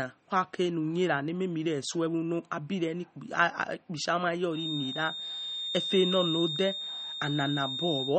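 MP3 compression runs through the whole clip: the speech sounds watery and swirly, with nothing above 8.4 kHz and smeared consonant attacks. This is likely a low-bitrate encode, which fits about 32 kbps, where weak frequency lines flicker between frames and the treble is cut off.

A feedback whistle enters at 4.50 s and lasts to the end: a thin, steady tone at 3.7 kHz, a few decibels below the speech and swelling and fading slowly in level. Its likely cause is a loudspeaker-to-microphone loop held just short of runaway feedback.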